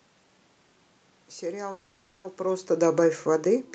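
From 1.71 s to 2.26 s the speech stalls in what sounds like a call audio freeze. The last sound before the stall carries on as a fading buzz or hiss instead of cutting to silence. Its likely cause is packets held up in transit, so that the jitter buffer ran dry and the receiver stretched what it already had. When the audio resumes it picks up where it stopped, with nothing lost. The pause adds roughly half a second of delay, 530 ms.

From 2.39 s to the end the level sinks steadily, a case of automatic gain falling. The gain control judged the input too hot or its background noise too strong and pulled its gain down gradually. The speech and the room noise behind it drop together, which separates this from the talker's own change in distance at about 1.5 s. Across the clip the band stops near 8 kHz, consistent with the Opus call path.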